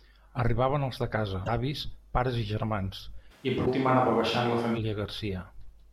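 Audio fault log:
1.43 s and 3.62 s: damaged data in a compressed stream. Right after "els de casa", and again at 3.62 s, a brief disturbance of about 0.06 s cuts through the speech. The decoder hit corrupt frames, lost sync and resumed at the next header.
3.33–4.76 s: switch to a distant microphone. The speech suddenly turns roomy and hollow, with thinner bass, then snaps back. Loudness stays about the same, which separates it from a gain drop, but room noise rises to roughly 35 dB below the speech. The likely cause is a far microphone standing in for the close one.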